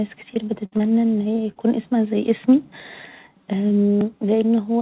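At 0.34 s, about 20 ms of the call failed to arrive, a short concealed packet loss. The receiver stretched the preceding sound across the hole and blended back, leaving a brief smear rather than a gap or click. At 0.65 to 0.74 s a burst of packet loss follows, around 60 ms missing, just before "ان هي". Concealment extends the last sound, which is turned down as the gap goes on, and speech resumes further along with that span gone. Its length and audible fade-out set it apart from the brief smears around it.

Two more short concealed losses come at 0.78 s, about 20 ms, again before "ان هي", and at 1.52 to 1.58 s, about 40 ms, between "ان هي" and "اسمها زي اسمي". Each is a quick wobble without a hard edge.

At 4.01 s a block of digital silence roughly 2 ms long appears, likely where the output buffer was left unfilled and the sound dropped out. Unlike concealment it has no fade, so it is heard as a tick or dip.

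Throughout, the G.711 mu-law call path limits the audio to nothing above 4 kHz.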